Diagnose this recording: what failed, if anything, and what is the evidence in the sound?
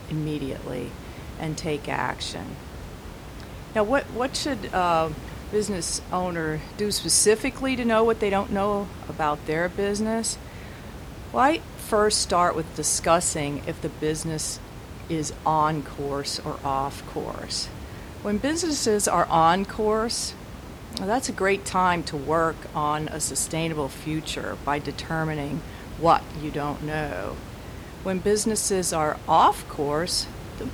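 Nothing in the chain failed.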